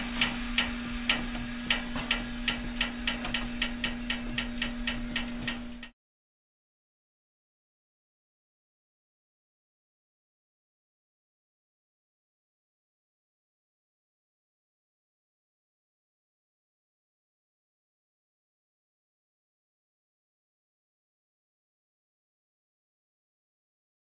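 Nothing technically wrong turns up anywhere in this recording, so there's really nothing to flag here.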